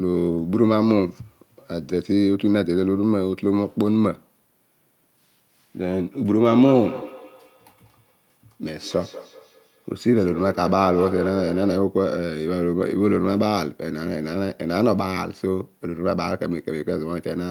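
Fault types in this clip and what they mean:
Feedback echo between two devices: from 6.33 s to 11.92 s the speech comes back as a thinner, ringing copy about a fifth of a second behind itself, peaking about 13 dB below the direct speech. A second device in the room is replaying the call into a microphone whose echo canceller only removes its own playback. Unlike room reverberation, which smears sound continuously, this returns as distinct repeats at a fixed spacing with a metallic edge.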